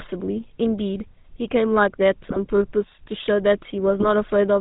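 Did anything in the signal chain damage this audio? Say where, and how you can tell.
Yes. The codec stage damaged the whole speech clip. Voices carry a buzzy, gravelly roughness and nothing above 4 kHz. That points to the GSM full-rate codec at 13 kbps. It rebuilds speech from a vocal-tract model driven by sparse, regularly spaced pulses.

Network-side GSM bit errors hit twice, from 2.24 to 2.39 s and from 4.00 to 4.10 s. The speech squawks, pops and gargles there. Flipped bits corrupted filter, pitch and gain values, so the decoder bent the spectrum and spiked the level frame by frame.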